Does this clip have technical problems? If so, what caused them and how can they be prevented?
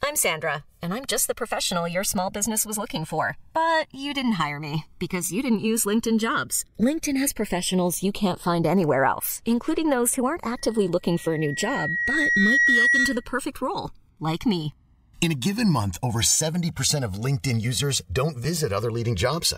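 Yes. The two channels drift apart for the whole clip: their clocks disagree by a couple of hundred parts per million, so the gap creeps up to about 2 ms by the end, and in mono the comb notches sweep slowly, giving a slow flanging. Clocking both recorders from one source, or recording on a single device, keeps that from happening.

There's also a loudspeaker feedback squeal from 10.57 to 13.32 s, starting right after "including those who aren't" and gone before "role like me". The mic was hearing its own speaker, and at 1.9 kHz the loop gain topped one, so that tone swelled over a couple of seconds to a few dB above the speech. Keeping the mic out of the speaker's throw, backing off the gain, or notching 1.9 kHz would prevent it.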